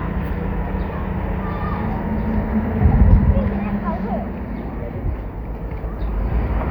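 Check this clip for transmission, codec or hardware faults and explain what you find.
Nothing in this recording of everyday sounds points to a transmission, codec or hardware fault.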